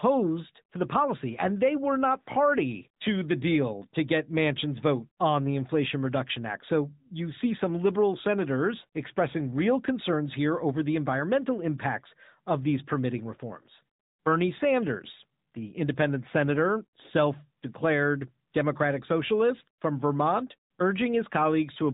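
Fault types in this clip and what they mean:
AMR narrowband mobile codec: The speech runs through the 2G/3G phone codec throughout. Nothing above 3.8 kHz survives, so it sounds thin and boxy. Each frame is rebuilt from a pulse-driven vocal tract model. A plainly audible buzzy, synthetic edge fits a mid mode near 10.2 kbps.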